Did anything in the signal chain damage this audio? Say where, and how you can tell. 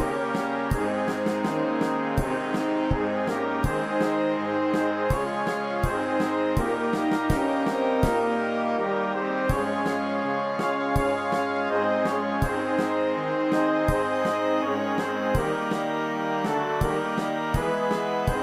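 Yes. A switching supply whistle appears in the analogue stage, from 14.14 s to the end of the clip at 18.42 s. It is a thin, high tone near 3 kHz. Its pitch wanders between about 2.97 kHz and 3.07 kHz as the supply's load shifts. It sits roughly 25 dB below the wanted signal. A switching regulator ran in an audible burst mode or beat with another supply and leaked its ripple into the audio path.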